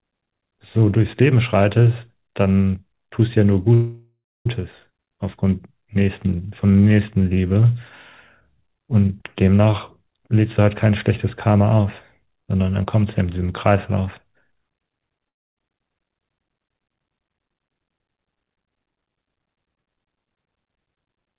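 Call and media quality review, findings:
Call audio freeze, 3.74–4.47 s. Packets most likely held in transit, jitter buffer underran. Receiver stretched the last sound into a fading buzz, then about 0.26 s of silence. About 0.71 s gap inserted into the audio, nothing lost, playback resumes where it stopped.

Skip ahead, 4.89–4.92 s. Audio dropped in transit or by the buffer on overflow, with later audio already queued. Roughly a third of a second of sound dropped. Both sides of the cut joined almost directly, a short abrupt jump forward with no pause.

Jitter buffer slow-down, 4.99–7.61 s. Buffer rebuilding reserve by repeating single pitch periods and pause fragments many times over. 0.30 s added, audio running at 89% speed at unchanged pitch. Drawn-out sounds through the stretch.

Long network dropout, 15.29–15.58 s. Stream most likely interrupted, with 0.28 s of audio never delivered. 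Concealment extends the last sound as a fading buzz, then about 0.27 s of silence. Audio returns further on, lost section absent. Band limited to 4 kHz throughout, consistent with the G.711 mu-law call path.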